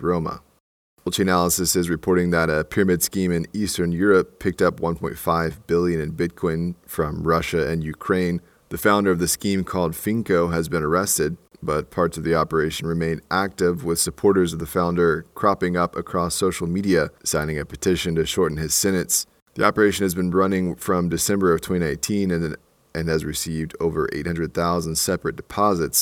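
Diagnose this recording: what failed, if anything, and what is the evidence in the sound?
Nothing failed in this recording.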